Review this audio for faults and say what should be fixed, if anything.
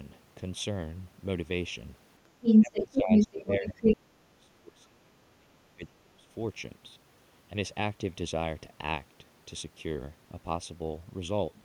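The whole clip has a hollow, slightly phasey colour, and that's channel delay (comb filtering). One channel looks to be running only a fraction of a millisecond late, around 0.3 ms, so when the two get summed to mono they cancel at evenly spaced frequencies. The first notch sits somewhere near 1.5 kHz, with more stacked above it, and that takes the body out of the upper mids. To prevent it, keep the channels sample-aligned before any mono fold-down, or just take one channel.

From 2.42 to 3.97 s there's a second voice bleeding in over the speech, and it's loud, roughly 10 dB hotter than the talker. That's the other side's voice leaking through. It's likely far-end audio coming out of a loudspeaker near the mic that the echo canceller didn't fully strip out. To prevent it, use a headset or give the echo canceller a cleaner reference and enough time to converge.

Overlapping that, from 2.6 to 6.28 s, the talker keeps ducking and breaking up, dropping by something like 25 dB at the worst points. 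Across roughly three seconds in total it's either thinned out or gone. That's speech suppressed in double talk, with the canceller likely clamping down on everything while both sides talk at once. To prevent it, cut the acoustic echo at the source so the canceller doesn't have to suppress so aggressively when both people talk over each other.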